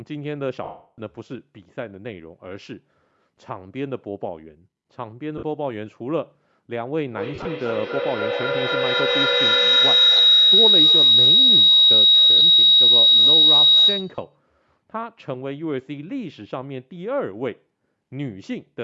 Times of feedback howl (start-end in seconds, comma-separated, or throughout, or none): 7.12-14.36